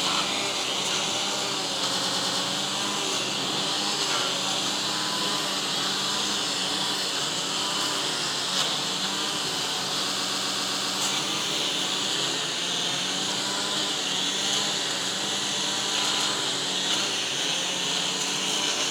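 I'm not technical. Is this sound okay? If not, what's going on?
No. The sound stutters six times, replaying a short snippet like a skipping record, at 0.35, 1.97, 4.98, 10.15, 12.74 and 16.13 seconds. The worst, at 10.15, loops several times. This is repeated frames: small stored chunks of audio were copied more than once, so they play again.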